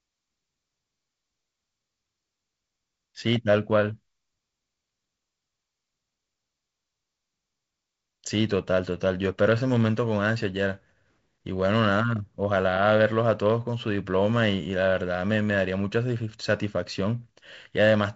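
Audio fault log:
No faults found; the G.722 wideband telephone coding leaves nothing above 7.7 kHz, adds a light hiss in the upper band, and gives a slightly grainier lower band that fits the 48 kbit/s mode.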